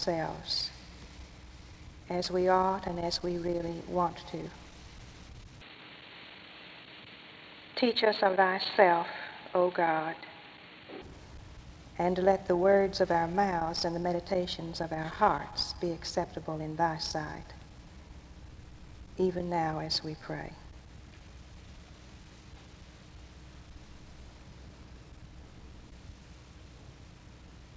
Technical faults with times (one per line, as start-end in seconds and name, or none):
5.61-11.02 input switched to a poorer device